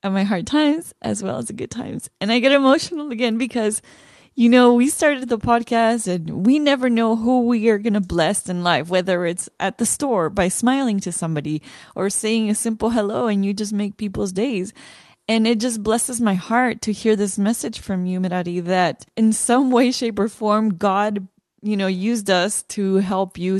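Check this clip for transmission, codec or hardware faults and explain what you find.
No faults detected in this speech.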